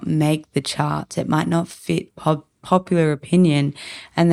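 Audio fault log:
Nothing stood out on listening to this speech recording.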